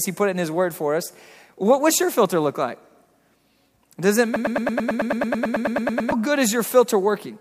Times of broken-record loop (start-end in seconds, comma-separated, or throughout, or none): 4.36-6.12